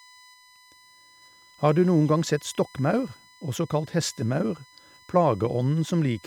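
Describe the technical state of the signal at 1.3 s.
At 1.3 s the speech carries USB whine, which runs through the whole clip rather than starting there. Current drawn by the USB bus in 1 ms frames leaks into the audio through power or ground, giving a fixed-pitch whine at 1 kHz, loudest at its 2 kHz multiple, roughly 30 dB below the speech. A spectrogram shows unbroken horizontal lines at 1 kHz and 2 kHz, and the waveform carries a thin ripple visible in the pauses.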